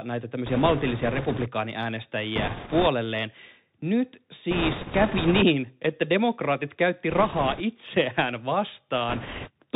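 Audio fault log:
Throughout: Bluetooth CVSD headset codec. The speech is cut off above 4 kHz, s sounds come out scratchy, and a grainy hiss sits under the voice. CVSD sends one bit per sample, saying only step up or step down, and the step size adapts. Where the speech rises faster than the step can follow, it distorts. That stepping grain, rather than the smeared, warbly artefacts of a frame-based codec, is what identifies it, and it fits a 64 kbit/s CVSD link.
0.46–1.48 s, 2.36–2.87 s, 4.51–5.43 s (ending just before "että demokraatit käytti"), 7.10–7.61 s (just after "että demokraatit käytti") and 9.09–9.50 s: bit errors on a Bluetooth voice link. Each stretch has a rushing, crackly noise riding on the speech, strongest in the 4.51–5.43 s stretch, where the error rate is around 7 percent against roughly 3 to 5 percent elsewhere. There are no isolated sharp clicks, because every CVSD bit carries equal weight and each error fades quickly. 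Instead the crackle rises and falls with the loudness of the speech, which separates it from dropouts or packet loss.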